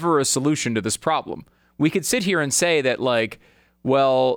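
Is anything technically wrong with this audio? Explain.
No, nothing in this speech recording shows a technical problem, and the signal holds steady and intact throughout.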